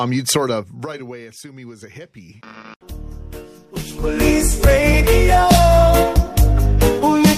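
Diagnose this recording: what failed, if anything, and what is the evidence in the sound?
Zipper noise from stepped gain in the buffer-level processing. From 0.4 to 1.28 s the level falls by about 20 dB, and from 3.6 to 4.32 s it climbs back by about 20 dB, each time in 1 dB jumps at around thirty per second with no smoothing between them. Every jump leaves a small click, so a fine ticking rides on the sound during both moves. The waveform envelope is a staircase, and the spectrogram shows faint, evenly spaced vertical broadband lines.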